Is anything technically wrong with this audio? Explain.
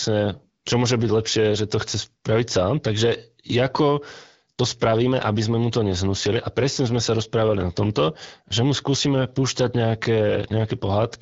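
No, nothing's actually wrong here; it's speech carried over the AMR wideband (HD Voice) codec at 12.65 kbit/s, a rate where that codec is doing its ordinary job and the voice comes across clear.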